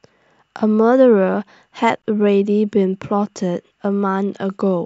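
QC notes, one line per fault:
2.02 s gap at a join of encoded pieces: an 18 ms silence with smeared edges, from encoder start delay and last-frame padding left untrimmed.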